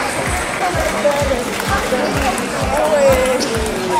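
No technical faults can be heard anywhere in this recording.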